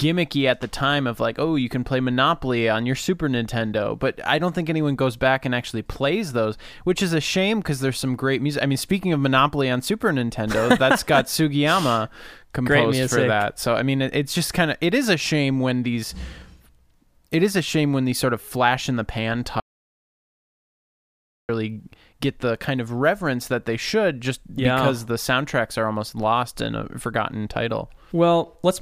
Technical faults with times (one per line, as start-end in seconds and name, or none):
19.60-21.49 audio dropout to silence